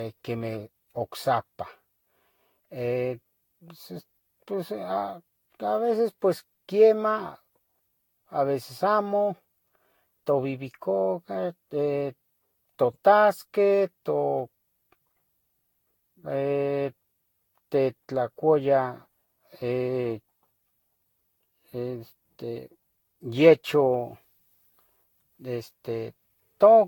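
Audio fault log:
throughout, generation loss: the speech sounds swirly, smeared and hollow, with blurred consonant onsets and a watery shimmer beyond what a single moderate-rate encode would leave. Nothing is present above 19.2 kHz. The likely cause is repeated lossy re-encoding, consistent with Vorbis at around 66 kbit/s applied something like seven times over. Each pass requantises on a shifted frame grid, so fresh noise and spectral holes pile up with every generation.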